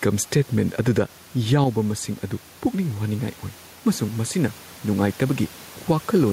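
Input gain set far too high for the microphone, with a fast limiter or compressor likely clamping each loud syllable, causes gain pumping throughout this speech recording. The level swings by roughly 5 dB, with the room noise about 29 dB below the speech, leaving the speech squashed and flat in dynamics.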